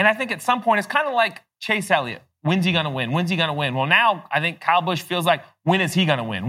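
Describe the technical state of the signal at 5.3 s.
Around 5.3 s the speech signal is intact, with no dropout, clipping, distortion or other fault at that point.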